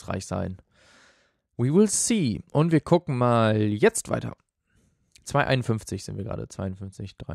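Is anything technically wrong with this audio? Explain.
No, nothing technically wrong stood out on listening to this speech clip.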